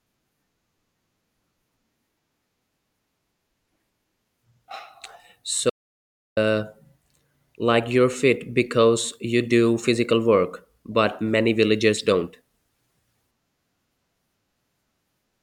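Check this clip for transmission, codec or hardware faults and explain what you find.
There is one fault in the speech: an audio dropout to silence from 5.70 s to 6.37 s. The speech cuts off mid-flow and about 0.67 s of audio is simply gone, replaced by digital silence with no room tone beneath it, before the speech resumes abruptly. The likely cause is a momentary loss of the input signal, such as a device disconnect, a failed link or a brief mute, while the recorder kept writing silence.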